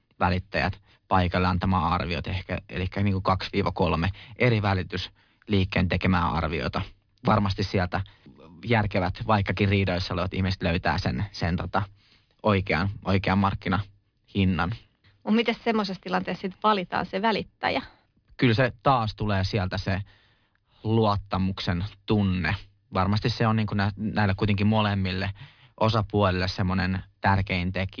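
No faults are audible anywhere in the speech recording.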